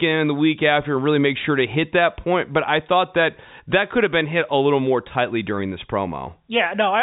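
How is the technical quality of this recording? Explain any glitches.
No glitches turn up anywhere in the recording. The speech comes over G.711 telephone coding at its normal behaviour, so the sound is band-limited with nothing above about 3.8 kHz, giving it the familiar narrow phone-line character.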